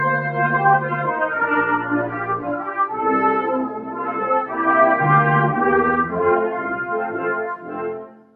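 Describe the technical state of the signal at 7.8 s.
At 7.8 s the sound sits inside a stretch, from 7.51 s to the end, where the noise suppressor cut this sound, dropping it by up to about 7 dB. Its steady, fading parts sink and their decay is shortened, while sudden onsets still come through. A plain fade would lower attacks and tails alike.

This happens because a noise suppressor made for speech was left on across the whole clip. It treats sustained tones, ambience and reverb as noise, and its gain swings by roughly 10 dB. Held sound pumps and thins out rather than staying level. A hard gate would instead chop cleanly to silence.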